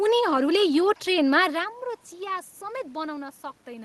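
The sender's audio clock runs faster than the receiver's, by about 4 percent, for the whole clip. This is clock drift between sender and receiver. The jitter buffer keeps filling with more audio than it can play on schedule, so the receiver has to shed material continually.

From 0.05 s to 3.63 s the receiver makes repeated timing corrections, cutting short pieces out of the stream to keep up with a sender running at 104 percent speed. The cuts come at uneven intervals, so any that are heard come through as small hiccups and an unsteady tempo.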